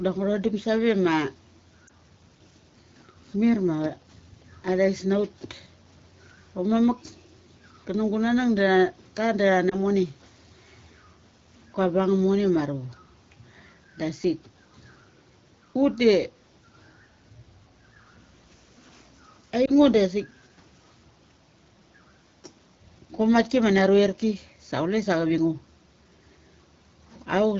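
Lost AMR speech frames fail their checksum over the AMR-WB link, so the decoder briefly repeats stale settings, causing short dips or warbles at 1.87–1.90, 9.69–9.76 and 19.66–19.71 s, each consistent with one missing 20 ms frame.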